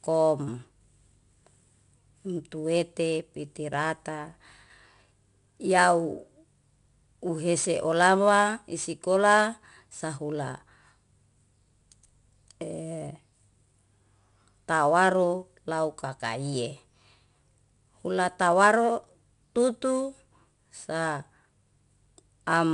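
Across the whole speech clip, 4-bit ADPCM compression leaves a gritty hiss riding on every louder syllable and roughens sharp onsets where the adaptive step lags. Nothing survives above about 10.6 kHz, which fits a low sample rate at a bitrate near 89 kbps.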